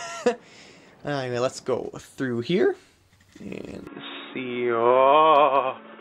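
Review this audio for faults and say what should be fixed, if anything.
At 3.87 s the sound suddenly goes dull and boxy through to the end, losing everything above 3.8 kHz and shifting level by roughly 5 dB, with fresh background noise around 40 dB down and no gap at the change. That's most likely the input switched to a poorer device mid-recording. Lock the input device before recording so the system can't hop to another mic or headset profile.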